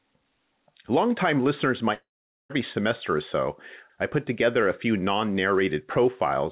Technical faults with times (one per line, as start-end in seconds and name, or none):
1.94-2.51 long network dropout